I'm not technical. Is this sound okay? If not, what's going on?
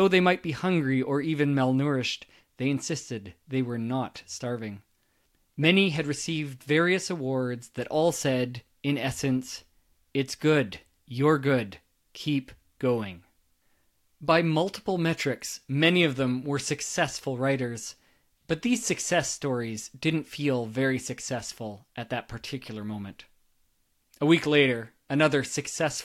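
Yes, nothing stood out as wrong when listening to this recording.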